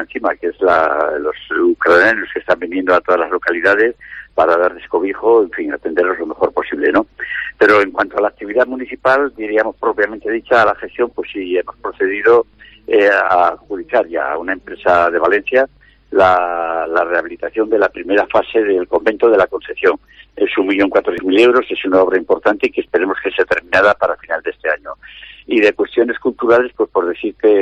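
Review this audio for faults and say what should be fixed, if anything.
At 21.18 s there is a brief glitch lasting under 20 ms, the mark of damaged data in a compressed stream. A corrupted stretch of the encoded file made the decoder misread or reject those frames, lose sync and hunt for the next valid frame header. What separates it from a plain dropout or a single-sample click is its cause: the decoder is misreading the stream and losing its place, not the signal simply going silent or stepping once. The fix is to replace that section from an intact copy, and to prevent recurrence by verifying transfers with checksums and keeping stream metadata out of the audio payload.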